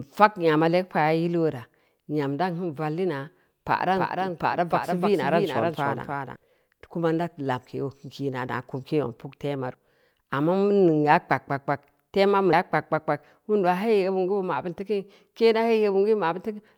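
From 3.96 s to 6.36 s a doubled audio track sits under the speech: a full-band copy roughly 300 ms late and about 5 dB quieter, likely a second capture path. Unlike an echo or reverb, it has no decay or room colour, and it starts and stops abruptly.

Compressed frames are skipped at 9.74 s and 12.53 s. The speech jumps ahead by roughly a tenth of a second, then by about 300 ms, which fits about three and then about seven whole 32 ms frames lost. Each join is an abrupt jump ahead, not a silent gap.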